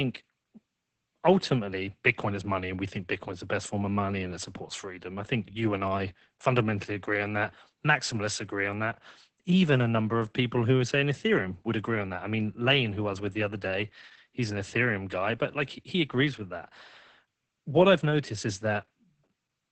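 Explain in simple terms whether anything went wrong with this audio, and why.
Opus voice compression affects the whole clip, from start to finish. The speech was squeezed hard to save data. Everything above about 8.6 kHz is cut away and the voice is rebuilt coarsely, so it sounds muffled, hoarse and slightly robotic.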